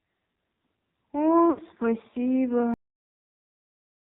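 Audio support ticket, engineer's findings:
AMR narrowband mobile codec, whole clip: band-limited speech, nothing above 4 kHz, buzzy, synthetic timbre. Heavy damage points to a low AMR-NB mode, consistent with roughly 5.9 kbps. Few excitation pulses per subframe leave the vocal-tract model thinly driven, so voicing turns coarse and artificial.

Lost AMR speech frames, 1.50 to 1.61 s: speech smears and sags for about 80 ms, fitting four dropped 20 ms frames. The decoder repeated the last good pitch and spectral settings at falling gain, then recovered rough and weak.

Cut-off end, 2.74 s: speech stops mid-sound, straight to digital silence through the remaining duration, no decay tail. Final buffers never written or played out; truncation at the capture or playback stage.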